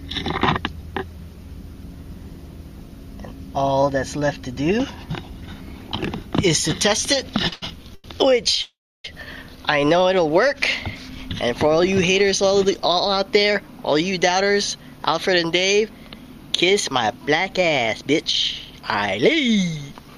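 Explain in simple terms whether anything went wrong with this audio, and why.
Three separate network problems can be heard, all in the middle of the clip.

From 7.37 to 8.05 s there are repeated stalls (stutter). The sound halts four times, each time stretching the last bit of sound while the receiver waits for late data. Together the pauses add 225 ms, about a third of that stretch, and the longest is 90 ms. Nothing is skipped; the audio just drags. Unlike a single freeze, it's several short hiccups in quick succession.

From 8.62 to 9.05 s comes a call audio freeze. The sound stops for 422 ms: the last sound is briefly continued, then 320 ms of that pause is silent, before the audio resumes exactly where it left off. The likely cause is data held up on the network until the receiver's buffer ran dry. It differs from the stutter by being one longer break, and from a dropout in that nothing is lost, only delayed.

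From 13.39 to 17.12 s there's a jitter buffer speed-up. The receiver had built up extra waiting audio, so it trimmed many tiny slices to catch up, roughly 0.3 s in all. The sound plays at 107% speed, which is enough to sound hurried, but the pitch stays the same. That unchanged pitch is what separates it from simply playing the recording faster.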